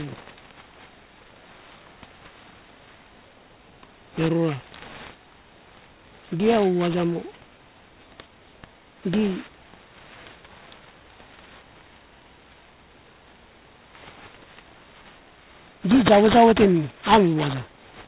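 Aliasing runs throughout the speech: downsampling without a low-pass filter folded content above 4 kHz back down, roughly 10 dB below the signal, so sibilants sound gritty and metallic. The 4 kHz fold points to an 8 kHz rate, and a spectrogram shows energy packed hard against that edge with mirrored, unrelated partials.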